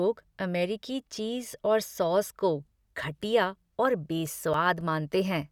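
A disc blemish corrupted more data than error correction could rebuild on successive revolutions, so the player patched the gaps. Right after "सॉस को घटिया और", from 4.26 to 4.81 s, three CD scratch ticks sound as brief clicks in the speech, each lasting only a few milliseconds.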